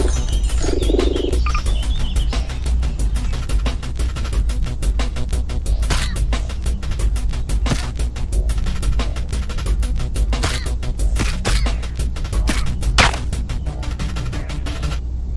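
Throughout, a resampler restarted on every block, converting 48 kHz to 24 kHz in 100 ms chunks with no shared history, so each edge carries a small error. This is heard as steady ticking at 10 Hz under the signal, and shows as faint vertical stripes every 100 ms on a spectrogram.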